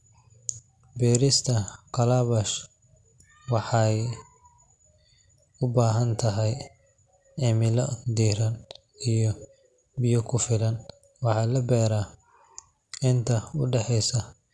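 No technical faults are audible.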